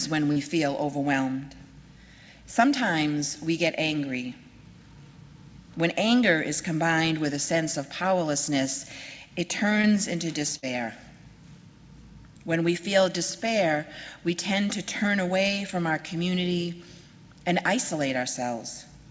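Short concealed packet losses at 0.32–0.38 s, 9.82–9.85 s and 15.48–15.51 s are brief smears where the receiver extends the preceding sound over 10–40 ms gaps and blends straight back. At 10.57–10.64 s, a burst of packet loss differs: about 60 ms vanishes, a held, fading fill covers it, and the audio resumes further on, skipping material. Throughout, the call codec leaves nothing above 8 kHz.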